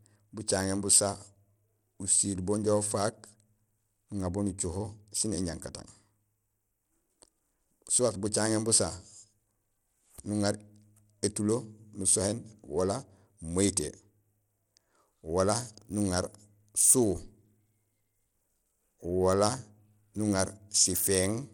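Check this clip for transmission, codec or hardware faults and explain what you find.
One codec fault runs through the whole speech recording. Across the entire clip the sound is plainly degraded, in a way that likely points to Bluetooth SBC compression. SBC splits the signal into a few wide bands and gives the weak upper ones too few bits. The treble thins and flickers, and a gritty grain rides on the speech. Nothing remains above 19.7 kHz. The coarseness fits a low bitrate of around 96 kbps.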